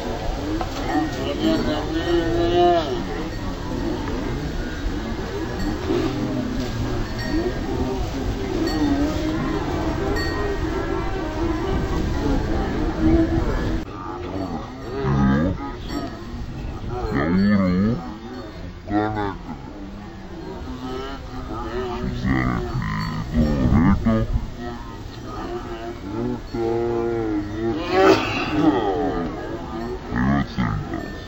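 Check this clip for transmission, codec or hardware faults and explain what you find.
One fault runs throughout: stereo read as mono. The whole clip plays at half speed (0.5x) and an octave low (-12 semitones), because interleaved left and right samples were read in sequence as one channel.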